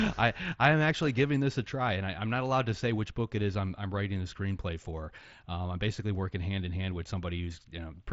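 Speech over a Bluetooth mSBC headset link, with nothing above about 7.7 kHz and the light graininess that wideband codec leaves on louder sounds, shows no faults.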